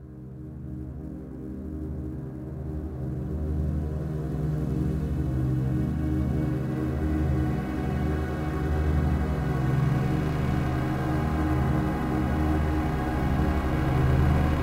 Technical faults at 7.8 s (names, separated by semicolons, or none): sample clock jitter